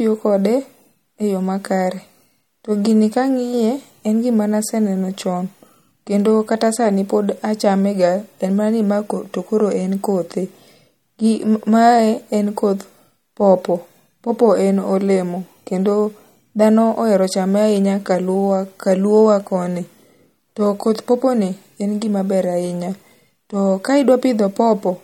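MP3 compression, throughout the 25 s of speech: the plainly audible codec damage is likely from an encoder starved of bits, which fits a bitrate near 48 kbps. Weak frequency lines drop in and out between frames, giving a watery swirl, and nothing remains above 18 kHz.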